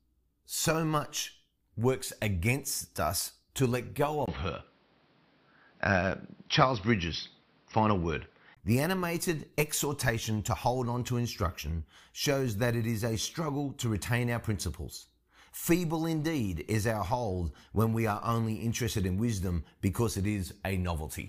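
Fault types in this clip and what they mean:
Input switched to a poorer device: from 4.26 to 8.57 s the speech turns dull and boxy, with nothing above 5.7 kHz, likely from a lower-grade microphone.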